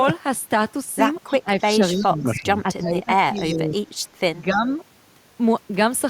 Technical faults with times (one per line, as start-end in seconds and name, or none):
1.26-1.32 echo leak
1.30-3.72 speech suppressed in double talk
2.35-2.44 echo leak
3.37-3.58 echo leak
4.53-4.71 speech suppressed in double talk